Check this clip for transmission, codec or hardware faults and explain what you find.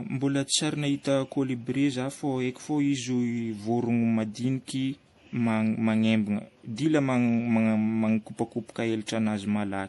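There's one problem, and it runs through the whole clip: the speech has been through more than one lossy codec. Nothing comes through above about 11.4 kHz, and the artefacts of the different codecs are heard together. That's likely transcoding between lossy codecs. The mix of artefacts points to a low-rate MP3 around 48 kbit/s, then re-encoded as AAC-LC at about 64 kbit/s. The AAC stage spent its bits on the MP3 damage and added its own, while the lowest cut-off in the chain stayed.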